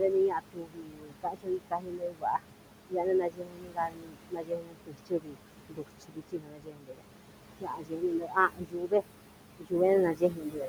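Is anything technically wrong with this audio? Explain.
Yes, there's a noise suppressor working hard on this speech, and it shows.

Noise suppressor artifacts run through the whole clip. The room noise sits only about 9 dB below the speech, and the suppressor pulls it down by about 22 dB between phrases. So the background pumps in and out, sinking between words and rising under them.

Speech cut by the noise suppressor shows up at 0.0–2.45 s, 2.89–5.37 s, 5.69–7.04 s, 7.6–9.03 s, 9.58–9.73 s and 10.13–10.68 s. The suppressor mistakes quiet speech for noise and drops it by up to about 22 dB (about 18 dB at the end), so soft consonants and word endings sound swallowed for anywhere from about 0.15 s to 2 s at a time.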